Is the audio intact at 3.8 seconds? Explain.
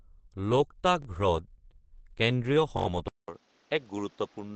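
No. At 3.8 seconds the speech sounds dull, slightly quieter and carries new background noise well beneath it. This is an input switched to a poorer device, likely starting at 3.08 s after a 0.2 s silence and lasting to the end. The replacement input passes nothing above 7.3 kHz, drops the level by roughly 5 dB and adds its own background noise.

Across the whole clip, including this moment, the speech also sounds hoarse and muffled, with nothing above 8.3 kHz. That points to Opus compression in its SILK speech mode, likely at a low bitrate around 16 kbps. There the encoder models the voice coarsely instead of preserving its fine detail.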